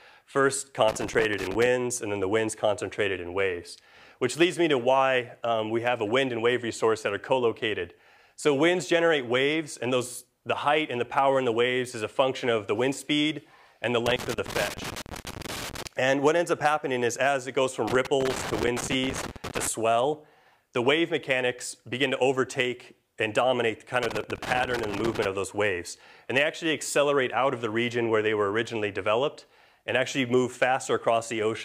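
Loose connector crackle breaks in at 0.88 to 1.66 s, 14.06 to 15.86 s, 17.88 to 19.67 s and 24.03 to 25.26 s. A worn contact makes and breaks, chopping the signal into irregular scratchy bursts, unlike the evenly spaced, identical ticks of digital clicks.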